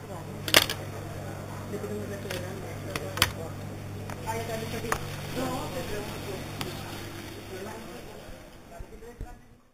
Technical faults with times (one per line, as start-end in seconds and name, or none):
0.00-9.73 imaging from sample-and-hold upsampling